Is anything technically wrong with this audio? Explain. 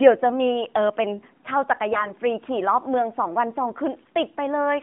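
Yes. From 1.92 to 2.13 s the speech has AMR bit errors. Roughly one in ten of the frames' less protected bits arrived flipped while the checksum still passed. Misplaced excitation pulses and wrong gain and spectral values make the voice hoarse, scratchy and gargly, with pitch and level roughly held. The AMR narrowband path underneath, with its band of about 150 Hz to 3.5 kHz, sounds like the 12.2 kbps mode.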